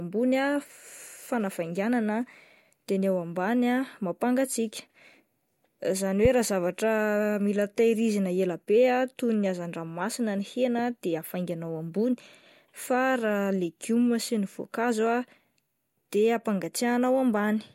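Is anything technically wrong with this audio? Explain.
Yes. A single loud pop occurs from 6.25 to 6.28 s. It peaks roughly 15 dB above the speech. The likely cause is a sudden voltage pulse, from a switch, plug, static or driver glitch, entering the signal. It is heard as one sharp thump while the speech continues underneath.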